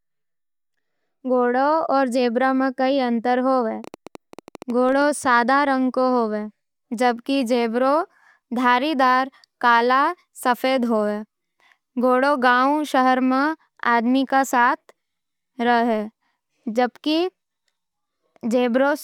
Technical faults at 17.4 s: none

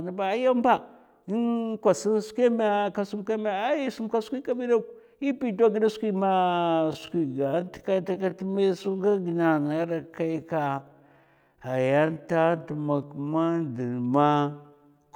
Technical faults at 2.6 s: none

